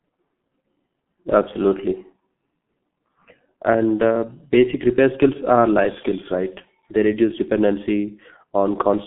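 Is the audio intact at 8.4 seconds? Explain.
No. At 8.4 seconds, as throughout the clip, the G.723.1 codec is audible. Its 30 ms frames and slow model updates, consistent with a rate near 6.3 kbit/s, leave the speech muffled and hoarse with smeared consonants. A spectrogram shows energy confined to about 150 Hz to 3.4 kHz, with nothing above 3.8 kHz.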